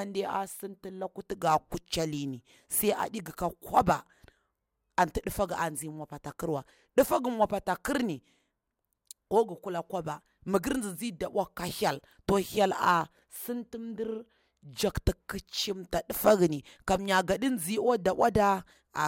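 No technical faults can be heard anywhere in this speech recording, and the signal holds steady throughout.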